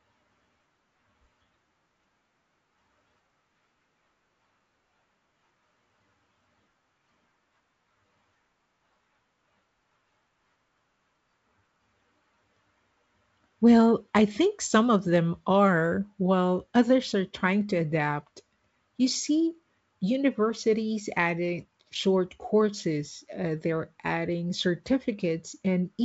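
Speech carried over G.722 wideband telephone coding at 64 kbit/s with no faults heard, the codec adding at most a faint trace of its own.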